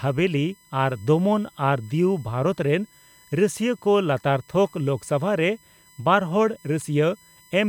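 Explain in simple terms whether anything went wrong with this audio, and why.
There's a USB whine running under the speech the whole way through: a faint, steady, high-pitched tone at 1 kHz, loudest up at 8 kHz. It happens when the USB connection's regular power pulses leak into the audio through the power or ground wiring.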